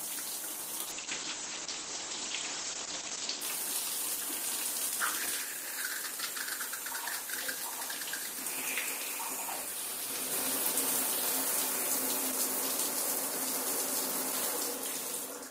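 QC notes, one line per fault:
0.87–3.47 s, call bitrate drop: the sound turns rough and muffled as the encoder is starved of bits, consistent with a fall from 32 to 10 kbps. Coarser coding smears detail, and the top end narrows from 20 kHz to 8 kHz, lowest for 2.4 s before recovering.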